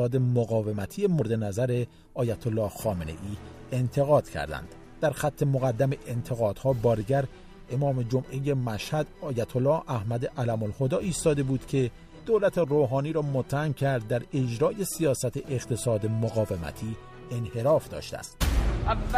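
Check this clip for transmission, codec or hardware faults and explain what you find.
Three faults of one kind are audible: compressed frames skipped, at 1.20 s, 7.00 s and 18.21 s.

At 1.20 s, whole frames of about 26.1 ms each were dropped, either missing from the file or rejected by the decoder as damaged. Roughly 70 ms of audio vanishes, and the overlapping neighbouring frames turn the join into a brief smeared blip rather than a click.

At 7.00 s, the same frame loss removes roughly 150 ms, the largest jump of the three. The sound lurches forward, again marked by a short smeared blip.

At 18.21 s, a smaller frame loss skips roughly 50 ms. The jump ahead is slight, heard as a quick smudged hiccup at the join.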